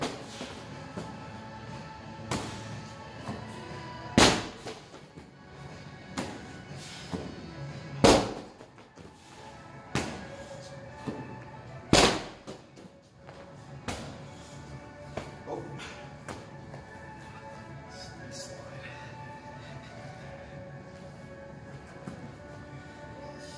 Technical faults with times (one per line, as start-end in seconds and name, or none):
none